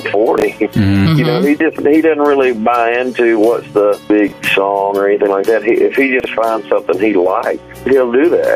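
Throughout the recording, gain pumping is audible. The input gain is likely set far too high for the microphone, so a fast limiter or compressor has to clamp down each time something loud arrives and then lets go again. That action moves the level by around 10 dB. Loud and quiet passages are forced close together, leaving the whole clip squashed and breathing.

Three chunks out of order occur, at 0.38 to 0.42 s, 4.28 to 4.32 s and 6.2 to 6.26 s. In each case a 20 ms block of audio reached the output late and was played after material that should have followed it. The first two blocks were one chunk late and the third was two chunks late. No audio is lost, but the sequence is scrambled, creating hard joins that are heard as a brief jumbled stutter.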